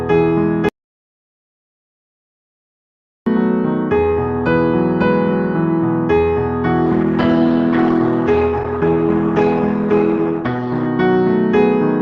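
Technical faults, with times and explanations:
0.69–3.26 s, audio dropout to silence: the signal cuts off abruptly and about 2.58 s of digital silence follows, with no room tone or noise floor underneath, before the audio resumes mid-flow at 3.26 s. Everything in that stretch is simply missing. The likely cause is a lost input, such as a disconnected device, a failed link or an accidental mute, while the recorder kept writing silence, which explains the completely dead gap rather than a fade.
6.86–10.86 s, adaptive stream at a lower bitrate: for these 4 s the quality drops suddenly with no gap. Codec artefacts become audible. At 10.86 s the original clarity returns just as abruptly. This sounds like a streaming player switching to a lower-quality rendition when throughput fell, consistent with Opus stepping down from around 64 kbit/s to 16 kbit/s and then recovering.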